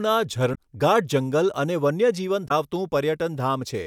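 A speech recording carrying two bursts of damaged data in a compressed stream, at 0.51 to 0.58 s and again at 2.44 to 2.51 s, each lasting about 70 ms. Corrupted bytes throw the decoder out of step, so the sound briefly breaks up while it hunts for the next valid frame header.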